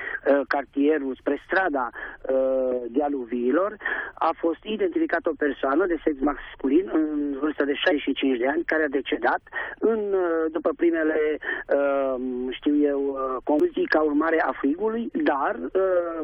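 Damaged data in a compressed stream corrupts part of the stream, so the decoder misreads the frames there and loses sync while it hunts for the next frame header. Each time this produces a brief glitch in the audio, first from 7.91 to 7.93 s and again at 13.60 s.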